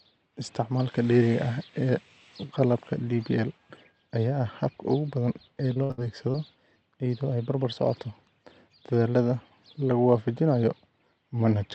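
A speech recording, carried over a call path whose top end stops near 8 kHz, in a way that fits Opus at around 40 kbps, develops repeated packet loss (robotic sound) from 5.73 to 6.36 s, just after "habka ugu badan ee". Four short dropouts, the longest 62 ms, are patched by extending the preceding sound, so about a quarter of that stretch is concealment and the voice turns choppy. A spectrogram shows smeared, repeated frames and abrupt breaks, and the waveform shows stuttering, repeated segments.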